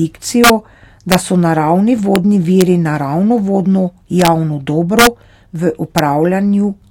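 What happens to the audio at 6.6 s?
At 6.6 s the speech carries on intact, with no dropout, click, distortion or other fault at that moment.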